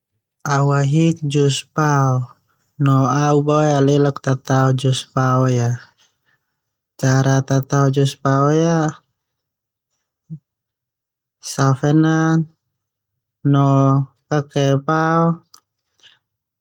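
No technical faults are audible anywhere in the recording.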